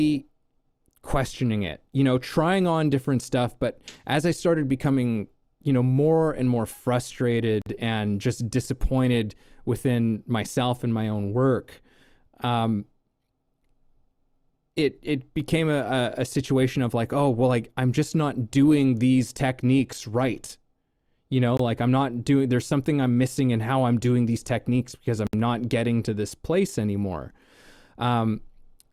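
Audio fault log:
7.62–7.66 s, 21.57–21.60 s, 25.27–25.33 s: block of digital silence, about 46, 23 and 65 ms long. The speech drops abruptly to silence and returns with no fade, so each gap sounds like a brief hole. The first gap's length fits a 2048-sample buffer that was not filled in time.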